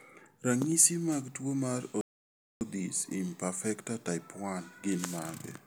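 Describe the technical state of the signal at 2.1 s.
At 2.1 s the speech has gone silent, cut off mid-flow just after "mag tuwo mar" and resuming at 2.61 s after a gap of about 0.6 s that began at 2.01 s. This is a playback stall, likely the player running out of buffered data or its output thread being blocked.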